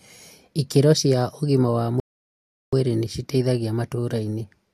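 At 2.00 s a rebuffering stall halts playback for about 0.73 s; unlike a dropout, the speech resumes at 2.73 s exactly where it stopped, nothing skipped.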